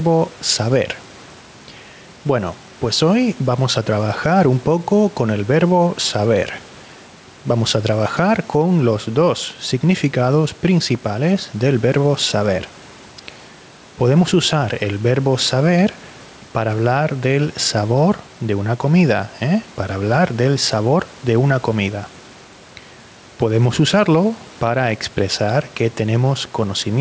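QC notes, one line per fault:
Throughout, gain pumping: the level swings by about 5 dB, bringing loud and soft parts closer together and squashing the sound, likely from excessive input gain driving a fast limiter.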